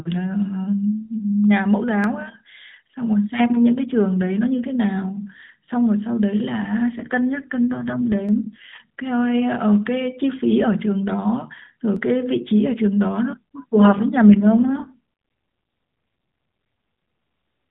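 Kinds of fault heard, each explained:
Dropped samples: three sharp clicks, at 2.04, 8.29 and 11.96 s, each a thin vertical line through the spectrum with no gap in the speech. The likely cause is a fraction of a millisecond of samples going missing, so the waveform jumps to a later value.
AMR rate drop: from 7.0 to 8.8 s and again from 14.29 to 15.0 s the speech turns rougher, buzzier and more synthetic, with no gap and no change in bandwidth. The mobile link pushed the AMR codec to a lower rate, which fits a step from 12.2 down to 5.9 kbps.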